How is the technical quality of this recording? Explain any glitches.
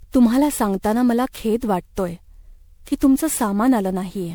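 The recording is degraded by one fault present throughout. Generation loss, whole clip: the speech sounds swirly, smeared and hollow, with blurred attacks, likely from around ten passes through a lossy codec, consistent with MP3 at 128 kbit/s, each re-quantising on a shifted frame grid.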